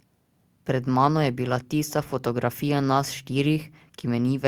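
No technical faults can be heard anywhere in this speech recording.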